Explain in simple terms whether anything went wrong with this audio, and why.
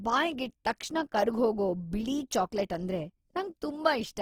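Something did go wrong, and it lasts the whole clip. The speech has a rough, grainy texture from start to finish. Vowels sound plainly noisy and fizzy instead of smooth. The highs are still there, so it doesn't sound muffled. The likely cause is Opus compression. The encoder was squeezing the sound into very little data. Where detail didn't fit, it filled the gaps with copied or noise-like sound, and that is what makes the speech grainy.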